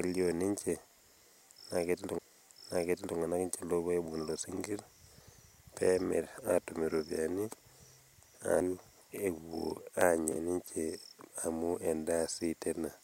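At 2.18 s and again at 8.60 s, the speech is hit by a CD skip. The laser loses its track and lands on another turn of the disc's spiral. Each time, a tick and a mute of a few milliseconds are followed by an abrupt jump in the speech.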